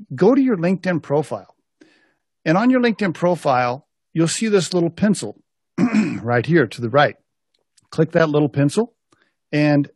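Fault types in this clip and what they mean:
Gap between stream segments: consecutive 6-second segments don't quite meet, so silence fills the hole, 9.4 ms at 2.19 s and 12 ms at 8.19 s, before "little pencil". Unlike a dropout, no audio is lost; the sound resumes exactly where it stopped.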